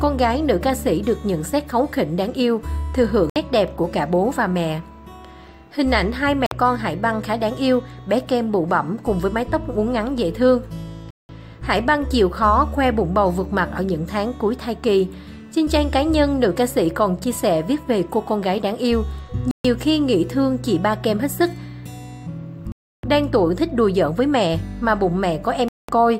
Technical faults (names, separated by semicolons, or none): Bluetooth stall